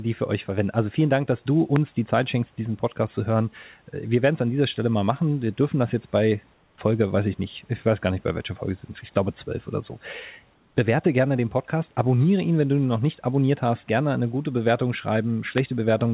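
A speech recording, heard through a narrowband call path with nothing above 4 kHz, has two kinds of fault. Two loud pops stand out, at 1.76 to 1.78 s and 15.58 to 15.60 s. Each is a single sharp click, well above the speech, and the second is louder. A voltage spike from a switch, plug or static is the likely cause. Comfort noise in place of the background appears twice, at 6.54 to 6.78 s and 10.54 to 10.76 s. The room noise there turns smooth and featureless and drops by about 3 dB, then about 1 dB. Discontinuous transmission filling silent gaps with synthetic noise is likely behind it.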